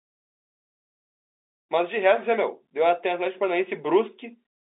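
Speech over an ordinary telephone line, band-limited to roughly 300 Hz to 3.7 kHz as G.711 telephone coding sounds, with nothing technically wrong to report.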